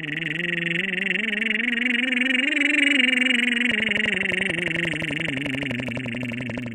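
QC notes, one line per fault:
3.71–6.67 s, train of clicks: a regular ticking at 11.5 clicks per second, some forty near-identical pulses standing well above the music, likely interference or a faulty connection; the even spacing and consistent shape set it apart from random crackle or isolated clicks.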